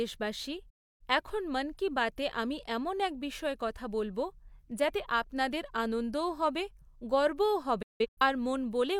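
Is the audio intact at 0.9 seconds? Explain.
No. At that point the receiver has lost the digital signal, or its frames are failing their checksum, so it mutes until valid frames arrive again. This digital broadcast dropout runs from 0.70 to 1.01 s. The speech fades out over about 8 ms and then falls silent for roughly 0.3 s, a gap that fits around seven missing frames. When the sound returns, the programme has moved on, and whatever was transmitted during the hole is gone.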